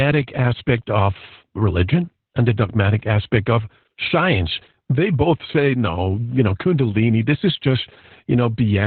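From start to finish the speech carries heavy Opus voice compression. The codec is running in its SILK linear-prediction mode at narrowband, which fits a very low bitrate around 8 kbps. Everything above 4.3 kHz is discarded, and the coarsely coded excitation leaves the speech muffled, hoarse and slightly robotic. On a spectrogram the energy stops at a flat ceiling near 4.3 kHz, and the harmonics below it look smeared and blocky.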